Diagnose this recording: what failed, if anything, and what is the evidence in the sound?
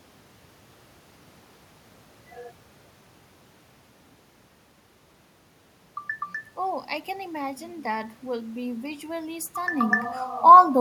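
Nothing in the recording stood out as a failure on listening.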